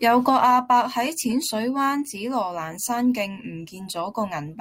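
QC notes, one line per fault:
Nothing to flag here; I listened the whole way and there's no problem to note.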